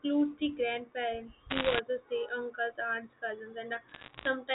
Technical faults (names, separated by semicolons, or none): bit errors on a digital phone line